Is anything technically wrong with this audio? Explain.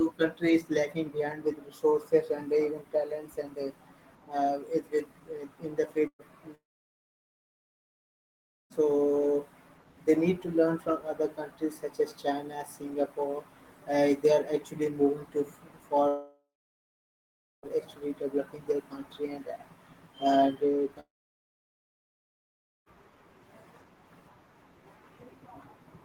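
Yes, there are a couple of network-type problems. Right after "in the", from 6.07 to 6.22 s, there's a burst of packet loss. About 120 ms of audio never arrived, so the receiver stretched the last bit of sound to cover the hole. You hear a short smeared tail that fades and then about 70 ms of near-silence before the audio picks up further along, with that slice simply gone.

Then there are three longer gaps, at 6.55 to 8.73 s, 16.08 to 17.78 s, and 21.00 to 22.89 s. Each sounds like a continuation of the last sound that dies away, followed by dead air of roughly 2.1 s, 1.2 s and 1.8 s respectively, before the audio resumes later with the middle missing. That pattern points to a long network dropout as the likely cause, with the stream just stopping for a second or two each time.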